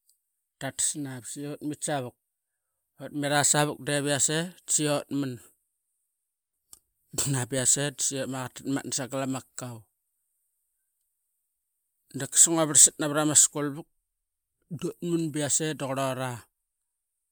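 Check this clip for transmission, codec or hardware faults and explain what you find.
I find no faults to report in this clip.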